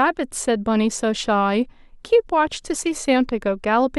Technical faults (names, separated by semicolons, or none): none